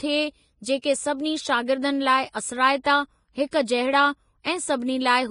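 Throughout the speech, the treble is hissy and grainy, with nothing above 10.6 kHz. The codec damage is heavy: consonant detail turns into a noisy wash, tones sound rough and attacks are blurred. This is likely Vorbis compression at a low setting, consistent with a bitrate of around 27.5 kbps. At that rate the codec lowers its cut-off and quantises the upper residue so coarsely above its smooth spectral floor that fine detail becomes noise of similar energy.

From 0.82 to 0.84 s, and again at 4.44 s, a short hiss comes just before an attack, which sounds soft and smeared. This is pre-echo, spread over 21 ms in the first case and 16 ms in the second. The transform codec spreads quantisation noise across a whole block. When a sharp onset falls late in that block, noise sized for the loud part spills into the quiet moment before it.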